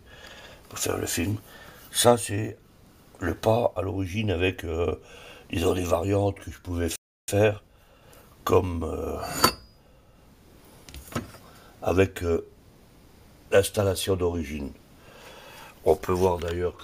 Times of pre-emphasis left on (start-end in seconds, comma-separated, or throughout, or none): none